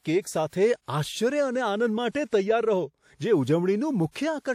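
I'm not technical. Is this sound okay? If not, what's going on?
No. At about 0.49 s there is pre-echo, lasting roughly 42 ms up to 0.53 s. A short hiss arrives just before a sharp sound in the speech, blurring its start. The compression spreads its noise across a short stretch, so some lands ahead of the sound.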